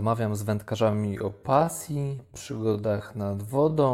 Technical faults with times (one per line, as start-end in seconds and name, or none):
0.81-3.93 time-stretched section